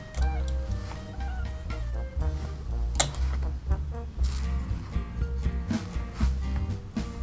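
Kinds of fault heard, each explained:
No dropouts, clicks, distortion or level problems can be heard anywhere in the recording, and the signal stays steady and continuous throughout.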